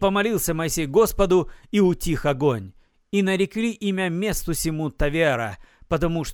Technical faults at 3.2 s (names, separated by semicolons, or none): none